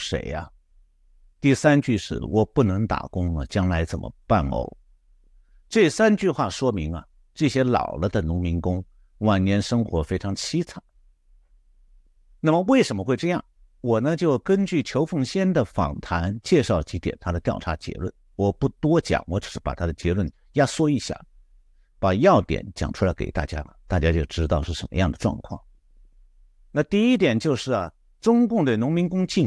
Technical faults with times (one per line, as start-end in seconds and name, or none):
none